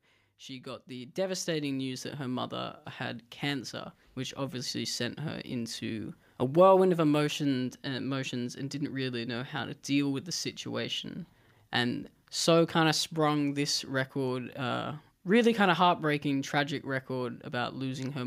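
From 0.47 s to 6.19 s the automatic gain rises: the gain control judged the input too quiet and slowly turned itself up by about 13 dB, settling just before "a whirlwind of emotions". Speech and background noise swell together over several seconds. That shared, gradual lift sets it apart from a speaker leaning toward the microphone, where the voice grows closer and fuller while the room noise stays put.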